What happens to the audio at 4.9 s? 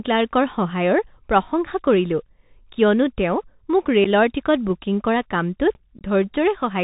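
At 4.9 s the speech carries Bluetooth CVSD headset codec damage, present for the whole clip rather than just that moment. The codec sends one bit per sample, only whether the waveform steps up or down, with an adapting step size, which fits a 64 kbps CVSD stream. Nothing above 4 kHz survives, so the speech sounds narrow and muffled. Loud, bright sounds outrun the step and distort, s sounds turn scratchy, and a granular hiss sits underneath.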